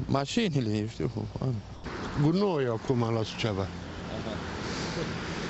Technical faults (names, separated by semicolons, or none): sound dropped by the voice detector